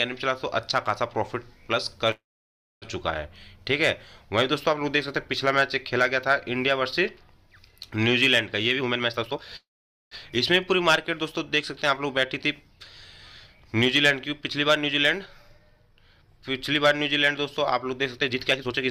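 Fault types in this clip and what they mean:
call audio freeze: at 2.11 s and 9.56 s the sound stalls, a brief fading continuation then silence, for 0.70 s and 0.55 s, likely from delayed packets emptying the jitter buffer; nothing is lost.
jitter buffer speed-up: the receiver trims pitch periods to shed excess buffered delay, so audio runs faster at unchanged pitch, 153% at 8.79 s, 108% at 14.41 s, 140% at 18.17 s.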